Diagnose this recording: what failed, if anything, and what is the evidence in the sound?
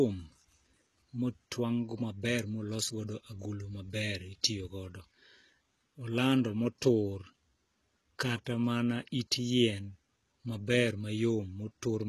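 Codec stage: s sounds turn gritty and metallic throughout, with nothing above 12.4 kHz. This is likely HE-AAC compression, whose rebuilt treble appears as blocky, repeated bands on a spectrogram.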